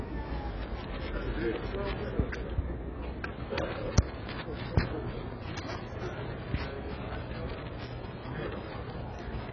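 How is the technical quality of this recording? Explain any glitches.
The technical quality is poor throughout, with heavy AAC compression damage likely the cause. Across the whole clip nothing reaches above 6.8 kHz, and the sound is dull, smeared and warbling, which fits AAC-LC at a very low bitrate near 12 kbps. The encoder starved many frequency bands of bits, leaving gaps and swirling texture. A simple low-pass filter would give a clean, steady loss of top end instead.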